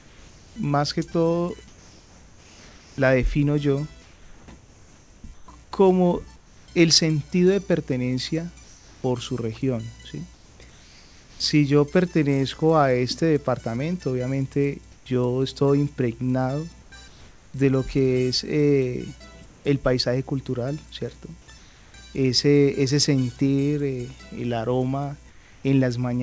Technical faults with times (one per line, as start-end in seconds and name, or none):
0.00-0.56 comfort noise in place of the background
4.02-11.40 comfort noise in place of the background
14.92-16.92 comfort noise in place of the background
19.46-21.94 comfort noise in place of the background
25.30-25.64 comfort noise in place of the background